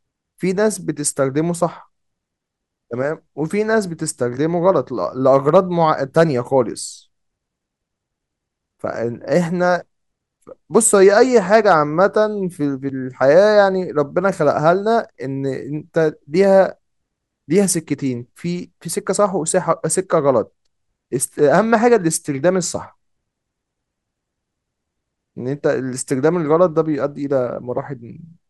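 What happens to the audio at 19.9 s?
Nothing goes wrong at 19.9 s; the speech there is intact, with no dropout, click, distortion or other fault.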